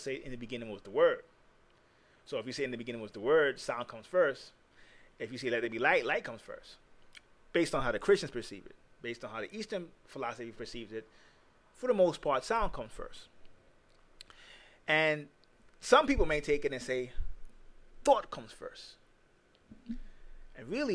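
No technical faults can be heard anywhere in the recording.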